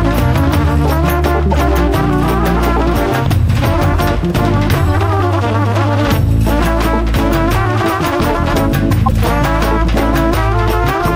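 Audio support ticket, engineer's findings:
Corrupt frame decoded at 1.51–1.61 s, 3.63–3.68 s and 9.05–9.12 s: brief error bursts spanning a few codec frames each. Damaged bitstream decoded rather than concealed, so these are bursts of misplaced energy.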